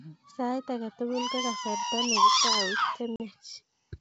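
At 3.16 s the speech drops into a hard-edged gap that runs to about 3.21 s. This is packet loss on an ADPCM call: about two packets, roughly 40 ms of audio, never arrived and were filled with silence. The G.722 decoder's adaptive predictor and step size then no longer matched the sender's, so the sound re-enters slightly distorted. On a waveform it appears as a flat, squared-off hole; a spectrogram shows a clean vertical blank band.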